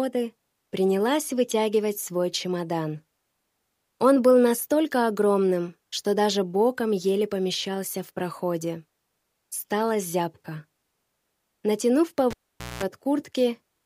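Near the end of the audio, from 12.31 to 12.83 s, a live cable is pulled and plugged in again. A pop at the start marks the break in contact, followed by roughly 475 ms of near silence. As the plug goes back in, about 205 ms of 60 Hz mains buzz appears while only the tip is touching, picking up hum with no ground or signal return. A second pop follows when full contact restores the sound.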